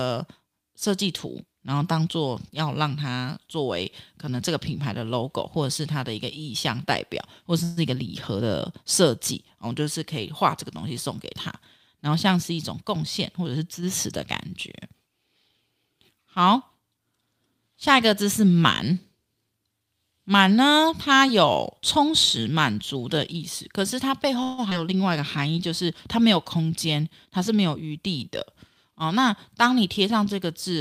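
A speech recording with four kinds of network playback fault. At 7.63 to 7.79 s and again at 24.43 to 24.60 s there is a call audio freeze: packets were likely held up in transit and the jitter buffer ran dry. The receiver stretched the last sound into a fading buzz or hiss for about 135 ms and then 151 ms, and the speech resumed where it stopped with nothing lost but with that much added delay. From 12.09 to 14.08 s and from 26.55 to 27.99 s a jitter buffer speed-up occurs. The buffer held too much audio, so the receiver trimmed short pitch-period pieces repeatedly, removing roughly 150 ms and then about 100 ms. The speech runs about 7 to 8 percent fast at unchanged pitch and sounds hurried. At 24.70 to 24.73 s, right after the second freeze, a skip ahead drops roughly 70 ms of audio, so playback jumps forward with the two sides butted almost directly together. Between 25.10 and 25.60 s a jitter buffer slow-down repeats pitch periods to rebuild a reserve, adding 44 ms. 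That stretch plays about 7 percent slow with drawn-out sounds at the same pitch.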